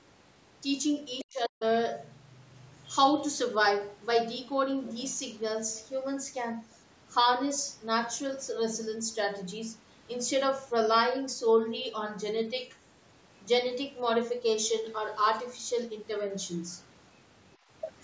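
From 1.23 to 1.65 s the speech dips sharply, falling by roughly 40 dB, with about 0.4 s affected in total. This is likely speech suppressed in double talk: an echo canceller, unable to separate this talker from far-end echo, attenuated both.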